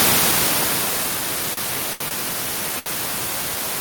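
Automatic gain falling opens this speech clip: from 0.05 s to 1.28 s the gain control judges the input too loud or its background too strong and pulls its gain down by about 7 dB, so the speech starts loud and then sinks steadily, with its background dropping along with it. The second fault is a short stall from a late packet, which happens four times as the jitter buffer runs dry. At 1.53–1.59 s, 1.93–2.02 s, 2.08–2.13 s and 2.79–2.88 s the receiver holds the last sound for 37, 72, 26 and 71 ms respectively, waiting for the overdue packet, then resumes exactly where it left off. Nothing is lost, but each stretch makes a sound linger unnaturally, with a faint buzzy or dipped quality, and the playback falls slightly further behind with each stall.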